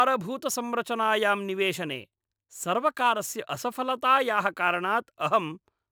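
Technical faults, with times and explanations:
Throughout, sample clock jitter. The converter's timing wanders by roughly 2 microseconds, so each sample lands slightly early or late. Steep, bright parts of the speech suffer most. The result is a gritty hiss about 35 dB under the signal that disappears in pauses.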